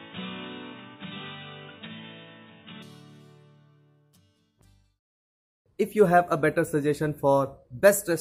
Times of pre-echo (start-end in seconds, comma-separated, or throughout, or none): none